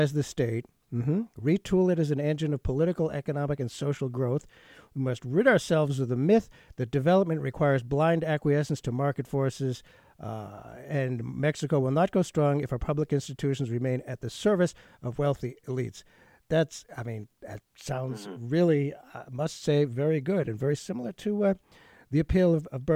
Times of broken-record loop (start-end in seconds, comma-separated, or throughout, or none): none